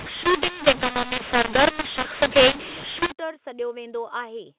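A speech clip whose G.711 telephone audio was encoded as mu-law but decoded as A-law from 0.00 to 3.12 s, a mu-law and A-law mixup. The mismatched expansion curve scrambles sample levels, so the speech turns harsh and distorted and quiet gaps fill with raised noise.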